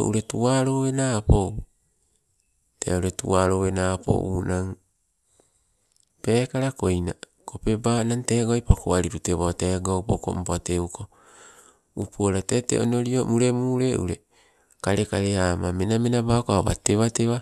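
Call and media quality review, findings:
No audible faults found in the speech.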